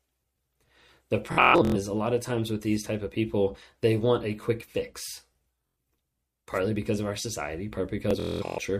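Bluetooth stutter strikes three times. From 1.33 to 1.76 s, before "a lot of times", lost packets make the receiver replay short slices as a machine-gun buzz. Speech then jumps ahead. It recurs at 5.67 s, after "want a quick fix", and from 8.11 to 8.59 s, after "because of our society".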